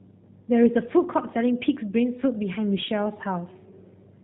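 Throughout, the speech passes through the G.729 codec at what sounds like 8 kbit/s: nothing above 4 kHz survives, leaving it plainly rough and synthetic.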